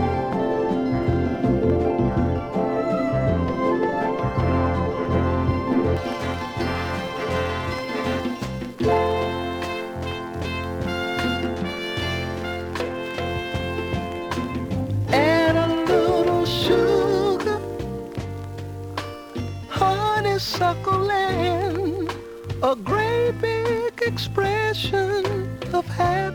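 From the start to about 5.97 s, de-emphasis applied wrongly tilts the top end down, about 11 dB lower at 10 kHz than at 1 kHz, so the sound turns dull and muffled. Unlike a low-pass filter, the treble fades along a gentle slope rather than stopping at a cut-off.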